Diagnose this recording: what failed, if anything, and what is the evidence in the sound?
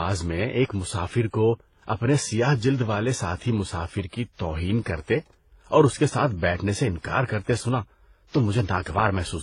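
Codec stage: across the whole speech clip, artefacts of different coders are heard together, and nothing remains above 10.8 kHz. This fits transcoding between lossy codecs, likely low-bitrate HE-AAC passed through WMA and HE-AAC again, each pass re-coding earlier damage while the lowest cut-off persists.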